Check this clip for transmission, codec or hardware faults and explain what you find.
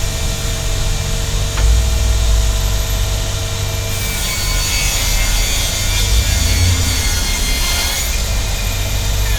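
Nothing stood out on listening to this recording of sounds.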